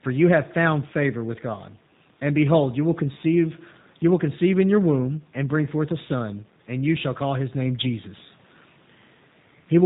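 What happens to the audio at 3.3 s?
At 3.3 s the speech sounds slightly rough and synthetic with nothing above 4 kHz, as it does throughout: G.729 codec damage, which fits 8 kbit/s coding that rebuilds speech from a vocal tract filter and pulses.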